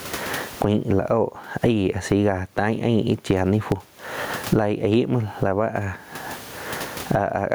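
Gain pumping runs throughout the speech, most likely from input gain set far too high with a fast limiter clamping each loud syllable. The room noise sits about 43 dB below the speech, and the gain swings by around 25 dB.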